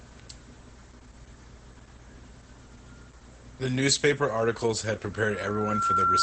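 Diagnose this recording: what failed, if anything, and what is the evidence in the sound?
The codec stage is at fault for the whole clip: this is Opus voice compression in its SILK linear-prediction mode. The speech is band-limited, with nothing above roughly 8.5 kHz, which is wideband operation, and the damage is plainly audible as a muffled, slightly hoarse and robotic quality. The coarsely quantised excitation and the band ceiling point to a low bitrate, consistent with about 12 kbps in 20 ms frames.

At 5.12 s a loudspeaker feedback squeal starts in the playback and acoustic path and lasts to the end of the clip at 6.23 s. A single 1.4 kHz tone swells over roughly 0.7 s until it sits about 10 dB above the speech. The microphone is picking up the loudspeaker it feeds, and at 1.4 kHz the loop gain exceeds one. That frequency therefore reinforces itself on every pass around the loop and keeps rising until it dominates.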